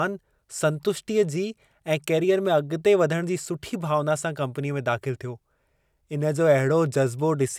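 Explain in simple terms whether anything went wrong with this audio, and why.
Nothing went wrong here: listening through this speech clip, there's no glitch, dropout or other technical hiccup to point to at any moment.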